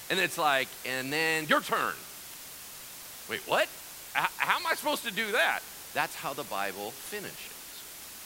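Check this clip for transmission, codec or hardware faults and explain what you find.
One fault runs through the whole speech clip: low bit depth with dither. From start to finish, the signal is held to very few amplitude steps, which fits roughly 6-bit resolution. Random dither noise was added before each sample was rounded, so the rounding error comes out as broadband white noise instead of grainy distortion that follows the signal. The result is a constant, even hiss sitting only around 15 dB below the speech, loud and uniform but free of crackle or harshness.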